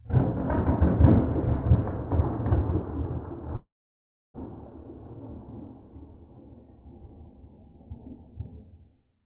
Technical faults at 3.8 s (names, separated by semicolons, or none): long network dropout